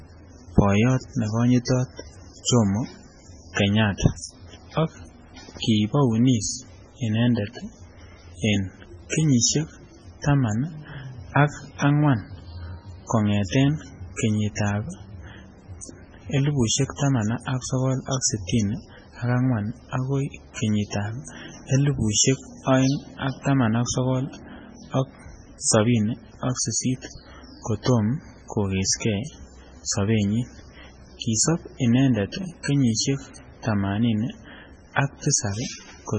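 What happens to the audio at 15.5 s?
At 15.5 s the speech carries heavy damage that runs through the whole clip, not just that moment: nothing survives above 9.6 kHz, and the sound is watery and swirly with smeared attacks. Likely cause: MP3 compression at a very low bitrate, consistent with about 16 kbps, starving frequency lines so weak ones flicker between frames.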